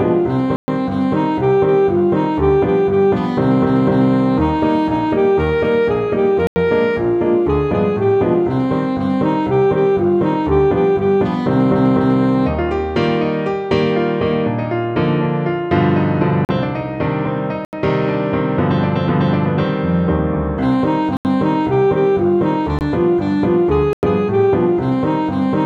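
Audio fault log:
0.56–0.68, 6.47–6.56, 16.45–16.49, 17.65–17.73, 21.17–21.25, 22.79–22.81 and 23.93–24.03 s: block of digital silence. The sound drops straight to silence and comes back with no fade. The 80 to 120 ms gaps are little holes, likely from the output buffer not being filled in time.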